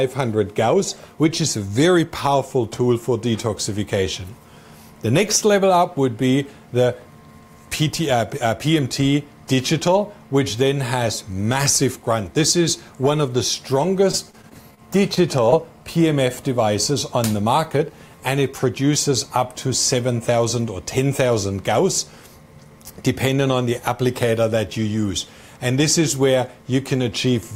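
A choppy stretch runs from 14.11 to 14.79 s, with the sound breaking up into a halting texture. This is repeated packet loss: five short holes open in quick succession, the longest about 23 ms, and each is patched by extending the sound just before it. Those patches make up roughly 14 percent of the span, so the synthetic fill keeps recurring before the real signal can settle.

Just after, two brief smears follow at 15.15 to 15.18 s and 15.50 to 15.54 s, each a quick wobble rather than a full break. Both are short concealed packet loss: about 20 ms of audio failed to arrive in time, and the receiver bridged each gap by carrying the preceding sound forward, then blending back into the real signal, leaving a momentary blur at each point.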